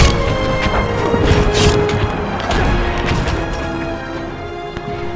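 Nothing here counts as a fault; the audio simply sounds like it travelled over a call link, with nothing above 8 kHz, which fits a wideband call codec such as G.722.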